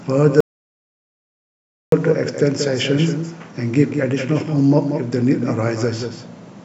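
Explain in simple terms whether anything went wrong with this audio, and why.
Two things went wrong here. First, a doubled audio track runs through the whole clip: every bit of speech is heard again about a fifth of a second later, a little quieter than the original. Unlike a room echo, the repeat doesn't fade away or sound roomy. It is a clean, full copy at a fixed delay, most likely because the same sound reached the recording twice, once through a slower path.

Second, there is an audio dropout to silence from 0.40 to 1.92 s, so about one and a half seconds of speech is simply missing. You can tell it apart from a natural pause because it cuts in mid-flow and the gap is dead silent, with no background or room sound at all. That points to the input likely being lost for a moment while recording carried on writing nothing.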